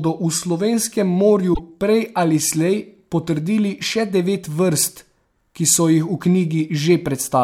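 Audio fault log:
1.50–1.60 s, damaged data in a compressed stream: a short glitch after "v slovenskem", before "prej ali slej potrdili". Corrupted frames throw the decoder out of sync.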